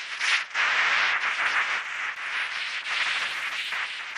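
A recording of sounds, with Wi-Fi interference from 1.44 s to the end at 4.17 s. A steady tick repeats every 102.4 ms, about ten times a second. It sits roughly 30 dB below the sound. A nearby Wi-Fi radio's beacon is being picked up and rectified by the audio circuit.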